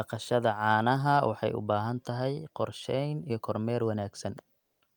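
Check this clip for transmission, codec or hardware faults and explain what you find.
One fault appears near the end of the speech, from 4.59 to 4.81 s: comfort noise in place of the background. For about 220 ms the faint room tone, sitting about 52 dB below the loudest speech, turns into a smooth, featureless hiss at the same level, losing the small variations of the real background. This is likely discontinuous transmission, as in Opus DTX: the sender's voice detector paused the stream and the receiver filled the gap with synthetic noise shaped to match.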